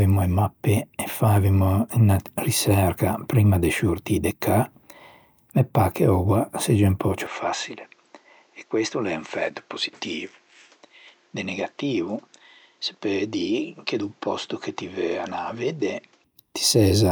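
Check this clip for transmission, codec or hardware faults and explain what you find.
One fault is present. From 7.27 to 16.24 s, the speech turns dull, about 10 dB quieter, and loses everything above 8 kHz. A faint new background noise appears, with no gap at the change. This is likely an input switched to a poorer device with a narrower band.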